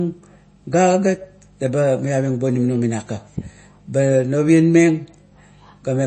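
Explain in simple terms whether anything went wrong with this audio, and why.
The speech was most likely squeezed too hard by MP3 compression, which throws away detail it judges unimportant. Throughout the clip, nothing remains above about 8.3 kHz, so the sound is dull and lacks sparkle, and there is a plainly audible watery, swirly quality, especially on s sounds.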